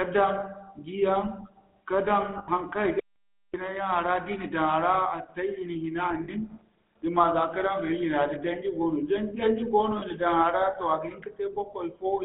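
Throughout, the speech carries the buzzy, gravelly roughness of the GSM full-rate codec. Its vocal-tract model is driven by a sparse, regularly spaced pulse excitation, and the band is confined to roughly 200 Hz to 3.7 kHz. On a spectrogram, the energy stops sharply there, and the harmonics look smeared and grainy.

Lost GSM frames occur at 0.40–0.43, 2.38–2.49, 6.24–6.29 and 9.98–10.03 s. Each time, the decoder repeated the last good frame, producing a brief metallic ring instead of new sound. The gaps last 20, 100, 40 and 40 ms, which fits one to five missing frames. A spectrogram shows frozen, stretched spectral bands, and the waveform shows a repeated pattern.

From 3.00 to 3.54 s, an audio dropout to silence cuts the sound out abruptly for about half a second. This is likely a lost input or link, with silence written in its place. The waveform is a dead flat line, and the spectrogram is blank, with no room tone.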